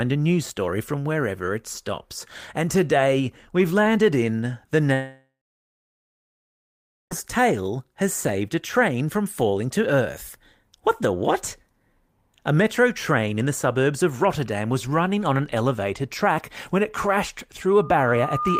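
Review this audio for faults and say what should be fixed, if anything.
From 4.93 s to 7.13 s the audio cuts out, most likely a long network dropout: the receiver stretches the last sound into a fading buzz, then roughly 1.8 s of near silence, and about 2.2 s of speech never returns. A jitter buffer with retransmission or forward error correction on that link would help.

At 17.78 s a loudspeaker feedback squeal starts: a 1.2 kHz tone builds over about 0.7 s until it's roughly as loud as the speech, running to the end. The mic is picking up its own speaker, and that frequency keeps recirculating. Lower the monitor gain, move the mic off-axis from the speaker, or notch 1.2 kHz to stop it.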